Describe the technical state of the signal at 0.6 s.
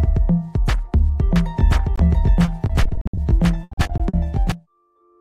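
The signal at 0.6 s is intact, with no audible fault at that moment.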